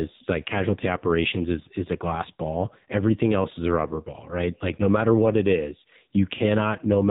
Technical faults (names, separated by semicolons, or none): AMR narrowband mobile codec